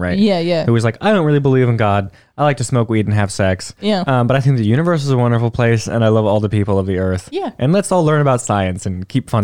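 No audible technical faults.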